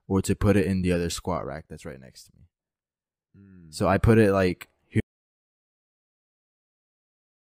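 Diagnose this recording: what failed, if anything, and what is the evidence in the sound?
The input feed was lost before the recorder, most likely a disconnected device, a failed link or an accidental mute, while the capture chain kept writing samples. The result is an audio dropout to silence: at 5.00 s the sound stops abruptly mid-flow and silence continues to the end of the recording. No room tone or noise floor remains in the gap, which points to the source being removed rather than faded, and whatever followed is unrecoverable.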